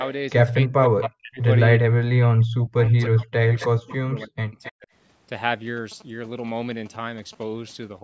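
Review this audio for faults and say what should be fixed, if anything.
Speech suppressed in double talk occurs from 0.66 to 1.42 s and again from 1.78 to 4.88 s. The speech dips sharply, by up to about 40 dB, and drops out in pieces. Roughly half a second is lost in the first stretch and about three seconds in the second. This is likely an echo canceller hearing both sides at once. It cannot separate the local talker from the loudspeaker return, so it turns everything down. Prevention: use a full-duplex echo canceller tuned to keep near-end speech during double talk.

Echo leak appears in three brief scraps, at 1.01 to 1.09 s, 3.59 to 3.66 s and 4.63 to 4.71 s. Each is a copy of the speech arriving 266 ms late. The copies sit about 10, 15 and 20 dB below the speech, fading each time. The far side is likely playing the call on a loudspeaker. Its canceller is not removing all of the pickup, so fragments are sent back. 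Prevention: have the far end use a headset, or fix its echo cancellation.

GSM signalling bursts run from 5.77 to 7.44 s. They form a galloping dit-dit-dit pattern of short buzzes at a 217 Hz rate, around 15 dB below the signal. A nearby 2G phone is exchanging signalling bursts with the network. The audio circuitry rectifies that radio energy into sound. Prevention: keep mobile phones away from the microphone and cabling, or use shielded, well-grounded wiring.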